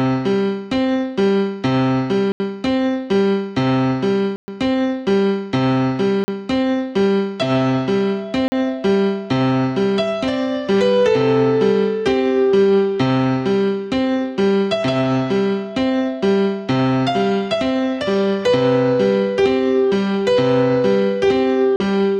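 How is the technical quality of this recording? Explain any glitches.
The recording has five dropouts. A block of digital silence cuts the sound at 2.32 s (80 ms), 4.36 s (120 ms), 6.24 s, 8.48 s and 21.76 s (40 ms each). In each, a run of samples drops to zeros and then returns with no fade, so the sound cuts out and back abruptly. The 120 ms gap is heard as a brief hole, and the 40 ms ones as shorter holes.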